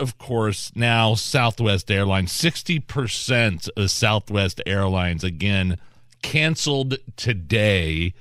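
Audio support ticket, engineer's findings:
Tiny skip in speech at 3.88 s. Overlap between stream segments at a segment boundary, fitting roughly 4 s segments: overlapping timestamps led the player to trim about 11 ms of audio that wasn't duplicated, leaving a waveform jump. Check segmenter/packager timestamps.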